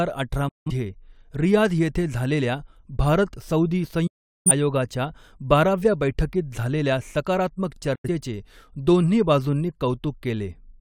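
Digital broadcast dropouts hit this speech at 0.48–0.71 s, 4.07–4.51 s after "येथे झालेल्या भारत सऊदी", and 7.95–8.09 s after "बाराव्या बैठकीत झालेल्या सकारात्मक". Each time the receiver muted on lost or corrupt frames with an 8 ms fade, discarding about 171, 384 and 85 ms of programme.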